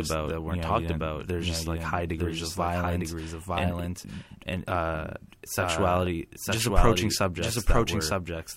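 From the start of the speech, a doubled audio track runs throughout: a second, full-band copy trails the original by about one second at roughly the same level, so every phrase is answered by a clean, dry repeat with no reverberant tail. The likely cause is the signal being captured twice, once through a slower path. On a waveform, each burst of activity reappears a second later at matching height; the spectrogram shows identical patterns shifted sideways.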